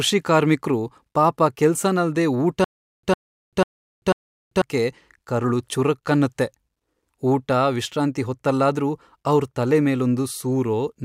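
From 2.64 to 4.62 s, a stutter with silent gaps: a 103 ms fragment repeats four times, every 493 ms, with 390 ms of dead silence between. This is likely a stalled stream replaying its last buffer.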